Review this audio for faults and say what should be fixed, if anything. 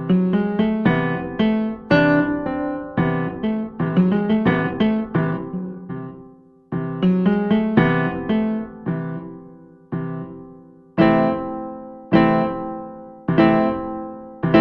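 A time-stretched section runs from 3.25 to 6.45 s: the pace jumps to about 1.51 times normal while pitch holds, giving a rushed texture. This is likely a pitch-preserving stretch that dropped short segments to shorten the passage. To prevent it, edit or trim the source material rather than compressing its duration to fit.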